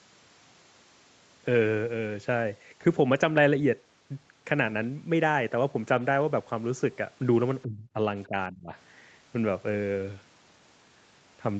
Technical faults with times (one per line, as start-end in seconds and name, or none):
7.63-7.98 speech suppressed in double talk
8.27-8.72 speech suppressed in double talk